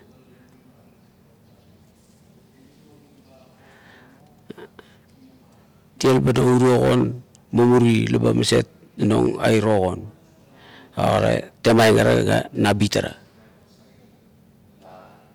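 Listening through the speech recording, nothing stood out as a technical problem at any point.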